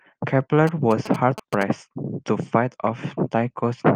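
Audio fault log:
0.67–1.63 s, GSM signalling bursts: a galloping dit-dit-dit of short buzzes at about 217 Hz rides over the speech for roughly a second, sitting around 10 dB below it. A 2G phone close by is only signalling, so it transmits in brief clusters of radio bursts rather than continuously. The audio circuitry rectifies that radio energy, turning each burst's 217 Hz pulse rhythm into audible clicks and buzz.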